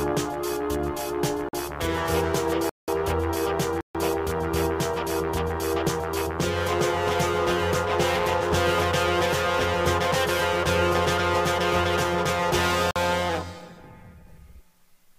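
Blocks of digital silence fall at 1.49, 2.69, 3.81 and 12.91 s, lasting 46, 186, 139 and 46 ms. The audio drops straight to silence with no fade. The lengths fit whole 2048-sample buffers left unfilled in time.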